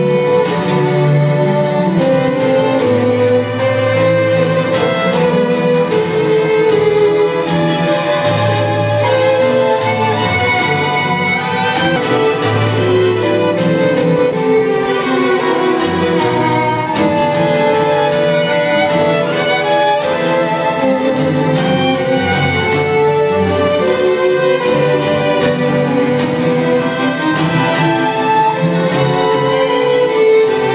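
The audio comes through a narrowband call path consistent with G.711 mu-law at 64 kbps, with nothing above 4 kHz. At 11.96 s there is a skip ahead: about half a second of audio was discarded, probably by a jitter buffer that had overfilled while later packets were already queued. Playback jumps straight from one side of the gap to the other with no fill, and the playout delay drops by roughly the same half second. From 14.02 s to 17.80 s a jitter buffer speed-up follows. The receiver is holding more audio than its target, so it repeatedly cuts out short pitch-period-length segments to drain the excess. Over those 3.8 s, about 150 ms in total is removed. The sound runs at about 104% speed with unchanged pitch.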